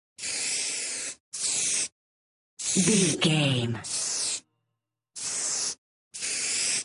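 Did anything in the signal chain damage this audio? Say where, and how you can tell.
No, nothing in the signal chain audibly damaged this audio. At no point can any stage be heard altering the sound.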